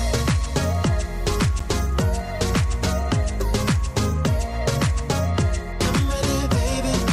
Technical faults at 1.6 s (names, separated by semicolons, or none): gap between stream segments